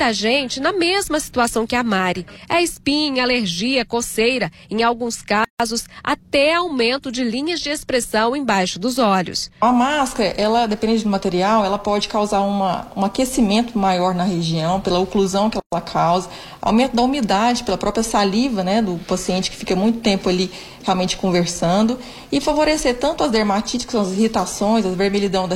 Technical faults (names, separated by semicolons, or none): gap at a join of encoded pieces